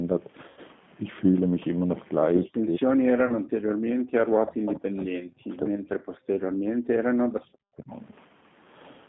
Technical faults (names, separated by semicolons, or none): G.729 codec; VoIP packet loss concealed by the speech codec; speech suppressed in double talk; echo leak